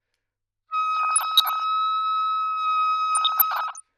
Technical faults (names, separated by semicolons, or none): DAB burbling